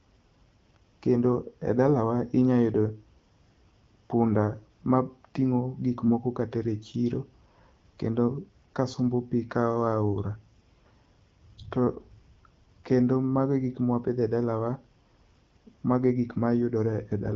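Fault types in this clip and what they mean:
AMR bit errors: Weakly protected frame bits arrived flipped at a few percent, so from 6.04 to 6.11 s the speech turns briefly hoarse and gargly.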